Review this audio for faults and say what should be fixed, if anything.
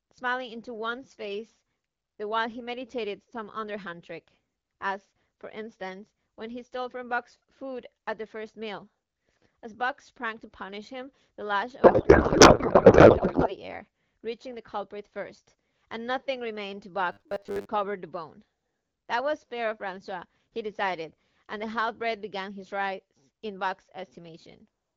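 From 11.83 to 13.58 s, a codec payload misread turns the speech into garbled warble: octet-aligned AMR frames are decoded as bandwidth-efficient. The spectrogram shows smeared, unstructured energy. Fix it by making both ends agree on the AMR payload format during call setup.

From 17.12 to 17.66 s, the speech becomes a rigid metallic buzz at 100 Hz. This robotic sound from repeated short buffers likely comes from 10 ms chunks being replayed in place of most of the real audio. It appears as evenly spaced horizontal harmonic lines and a waveform repeating every 10 ms. Prevent it by ensuring audio buffers are delivered on time so the playback side never has to loop stale data.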